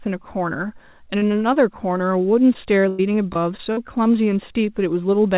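A brief smear at 1.18 s and another at 1.54 s mark short concealed packet loss: about 40 ms and 20 ms of audio arrived too late, so the receiver stretched the preceding sound over each hole. From 2.53 to 3.79 s the sound turns choppy. This is repeated packet loss (robotic sound): six gaps, the longest about 98 ms, each patched by extending the last sound. The band-limited sound, with nothing above 4 kHz, fits a narrowband telephone codec.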